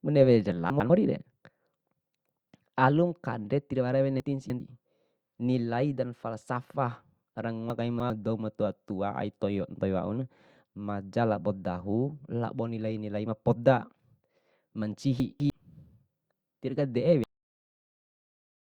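At 0.7 s, 4.2 s, 7.7 s and 15.2 s the speech jumps in sequence. These are chunks out of order. A 100 ms chunk arrives late, by one, three, three and two chunks. It plays after its successors. Each spot sounds briefly jumbled.

At 17.24 s there is a cut-off end. The final buffers never played. The speech stops mid-sound. Flat digital silence follows to the end, with no natural decay.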